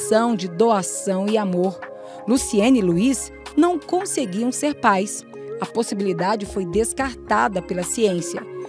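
Nothing technically wrong turns up here; the audio just runs along without anything jumping out as a fault at any point.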